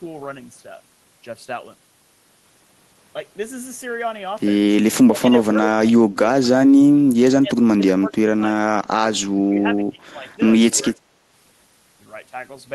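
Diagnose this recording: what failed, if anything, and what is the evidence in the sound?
Call processing: speech suppressed in double talk at 5.07–5.55, 5.86–6.19, 7.23–7.56, 7.76–8.42, 8.61–9.03, 9.32–10.4 and 10.74–10.98 s. The speech dips by about 5 to 35 dB. The echo canceller likely could not separate this side's overlapping speech from the loudspeaker echo and attenuated it.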